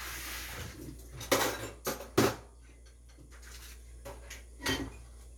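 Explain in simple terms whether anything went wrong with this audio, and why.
Stream segment skipped at 3.30 s: the sound jumps abruptly ahead with a small blip, likely because one chunk of the stream failed to load.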